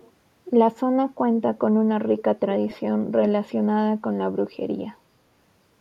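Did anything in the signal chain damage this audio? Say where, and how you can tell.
Yes, there is echo leak in the call-processing stage. A faint delayed copy of the speech appears from 0.00 to 0.11 s, lagging by about 408 ms and sitting roughly 30 dB below the speech. A second, louder scrap runs from 2.17 to 2.23 s, about 393 ms late and only around 15 dB down. Both are short. The likely cause is a far-end echo canceller failing to remove loudspeaker pickup before sending it back.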